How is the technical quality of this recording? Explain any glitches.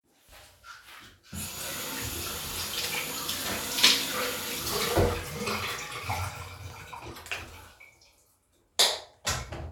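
No glitches or technical faults are audible anywhere here.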